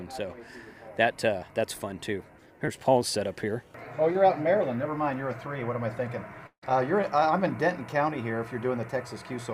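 At 2.65 to 2.69 s and again at 4.13 to 4.17 s there is a brief smear, a tiny wobble where the sound skips. These are short concealed packet losses: about 20 ms went missing each time, and the receiver papered over it by extending the preceding sound before blending back.

From 6.47 to 6.64 s the sound turns into a fading buzz that thins toward near-silence before the audio resumes further on, with a piece missing. This is likely a long network dropout: roughly 160 ms never arrived, so the receiver stretched the last sound until it died away.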